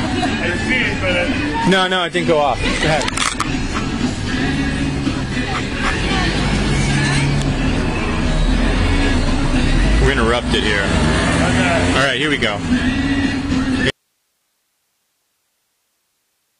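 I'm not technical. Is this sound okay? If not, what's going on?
No. At 1.32 and 8.88 seconds there's a repeated buffer: a tiny slice of sound plays five times in a row, giving a brief click-like buzz rather than a single pop. From 13.9 seconds to the end comes an audio dropout to a faint residue: the sound cuts off abruptly, leaving only hiss, likely because the signal was lost while the recording chain stayed live, so it isn't a fade or a natural pause.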